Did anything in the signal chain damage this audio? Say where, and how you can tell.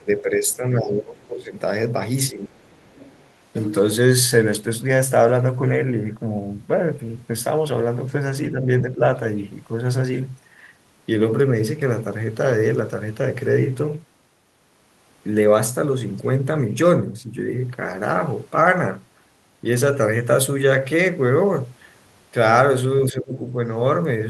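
Yes. The damage is in the call-processing stage. Faint scraps of the other side's voice leaking through sit under the main speech at 0.00 to 0.21 s, 0.49 to 0.56 s and 2.59 to 3.28 s. They are quiet, roughly 25 to 30 dB below the talker. This is likely residual echo: the far end was playing on a loudspeaker, the microphone picked it up, and the echo canceller left some of it in.

The second fault is speech suppressed in double talk. The talker's level sinks or breaks up at 0.00 to 1.53 s, 2.32 to 2.69 s, 8.50 to 8.68 s, 8.92 to 9.01 s and 23.04 to 23.37 s. The deepest drops are around 15 to 20 dB near the start and end, and the two dips around 8.5 to 9.0 s are shallow. The cause is likely the echo canceller failing to separate the talker from the loudspeaker while both sides spoke at once, so it turned everything down.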